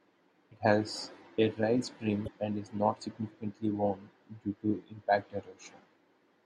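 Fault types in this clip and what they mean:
Damaged data in a compressed stream: corrupted bytes make the decoder lose sync at about 2.24 to 2.28 s, giving a brief disruption; spectrogram and waveform show a short break in the normal pattern.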